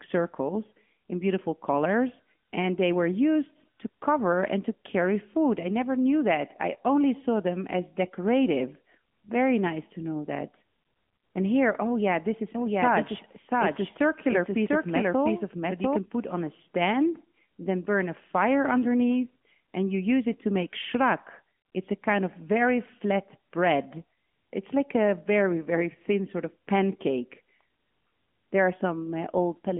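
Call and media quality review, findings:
AMR narrowband mobile codec, throughout: line band 150 Hz to 3.4 kHz, nothing above 3.5 kHz; buzzy, synthetic speech from vocal-tract-model coding, fitting a mode near 10 kbps.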